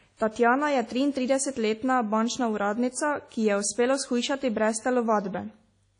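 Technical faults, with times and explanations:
Throughout, WMA compression: the speech rings and sounds washy, with a hiss that breathes with the signal, and nothing above 10.1 kHz. Likely a transform codec at a bitrate fitting 32 kbps, spreading quantisation noise across long blocks and zeroing weak lines.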